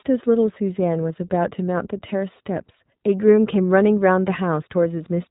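iLBC codec damage runs through the whole recording, from start to finish. The speech has passed through this narrowband VoIP codec, which codes each 20 ms frame's excitation independently of the frame before. The bandwidth, with nothing above 4 kHz, fits the codec, used here at 15.2 kbps. The damage is plainly audible: the speech stays clear but sounds muffled, slightly rough and synthetic, with a processed texture.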